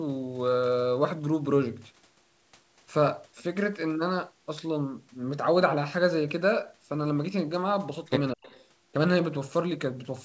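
From 8.33 to 8.49 s the speech sharply dips by around 40 dB, likely speech suppressed in double talk: the canceller muted the near talker, unlike a packet dropout's abrupt silence. From 8.44 to 8.64 s an echo leak likely lets a faint copy through, about 25 dB down and delayed 210 ms, distinct from room reverberation.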